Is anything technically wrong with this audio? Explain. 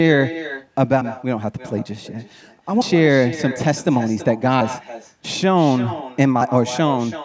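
Yes, two problems can be heard. Throughout, the speech is trailed by a quieter, thinner copy about a third of a second behind it, about 14 dB down. This is echo with no canceller: the far end's loudspeaker fed the microphone and nothing removed it. The audio tops out at 8 kHz, consistent with call microphone processing.

At 1.01, 2.81 and 4.61 seconds the sound skips abruptly, with roughly a fifth of a second missing each time, joined with no gap. The likely cause is audio missing between chunks, with processing in 2-second blocks dropping a piece at each handover.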